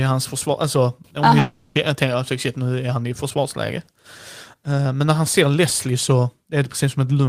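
From 1.39 to 1.78 s the speech turns into a buzzy smear of the last sound, fading over about 0.36 s before resuming at "att shit", with that stretch gone. This is likely a long network dropout, the receiver filling the gap itself.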